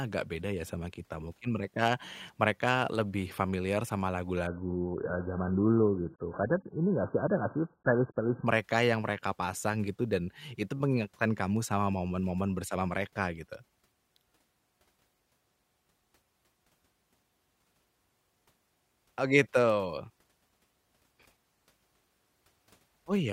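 After "mereka lebih familiar sama", from 4.47 to 8.47 s, the adaptive stream drops to a lower bitrate, consistent with a very low AAC bitrate. The sound abruptly turns muffled and warbly, and the spectrogram shows everything cut off above 1.8 kHz until "mereka yang mereka pasang".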